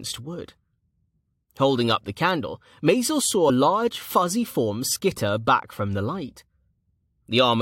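At about 3.46 s, right before "large fuzzy form skitter", there's a case of compressed frames skipped. A short run of the encoded stream never got played, either because it wasn't in the file or because the decoder rejected it as corrupt. The speech jumps forward by roughly a twentieth of a second, ending around 3.50 s, where the sound lurches ahead.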